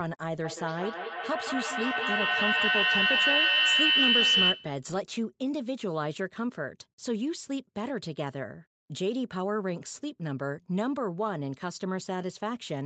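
From 0.44 s to 4.86 s a piercing tone of around 3 kHz swells over the speech, pulsing roughly five times a second and peaking about 7 dB louder than the talker. This is feedback howl: two devices in the same room share the call, and each pass from microphone to loudspeaker and back comes out louder than the last. The loop's round trip of about a fifth of a second sets the pulsing, and its favoured frequency sets the pitch. Like the speech, it carries nothing above 8 kHz.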